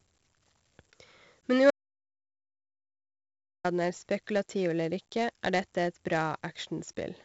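A gritty hiss rides every loud syllable throughout, with nothing above 7.7 kHz, from heavy 4-bit ADPCM compression, which fits about 64 kbps, whose coarse prediction steps track the signal's level. From 1.71 to 3.64 s the speech cuts to dead silence for about 1.9 s, an audio dropout to silence, likely from the input being lost while silence was written.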